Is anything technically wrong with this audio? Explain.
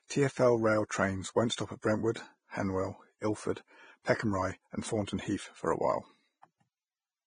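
Yes. Throughout the speech, the treble is cut off with nothing above about 9.7 kHz, and what remains up top is grainy and hissy, with roughened tones and dulled consonant onsets. This is likely heavy Vorbis compression, and the damage fits a bitrate of roughly 20 kbps. At that rate the encoder quantises the residue above its spectral floor so coarsely that fine high-frequency detail is swapped for noise of similar energy.

Pre-echo occurs twice, both soon after "won't stop at": from 1.81 to 1.83 s, spreading about 21 ms, and at 2.14 s, spreading about 17 ms. A sharp attack falls late in a transform block, and the quantisation noise sized for that loud onset is spread across the whole block, including the quiet moment before it. Each attack is heard with a brief hiss leading into it and a softened, smeared edge.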